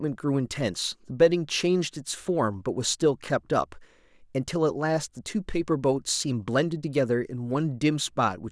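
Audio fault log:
No faults heard in this speech recording; nothing to log.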